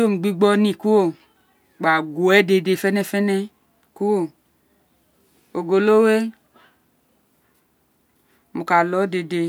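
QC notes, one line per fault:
No faults heard in this speech recording.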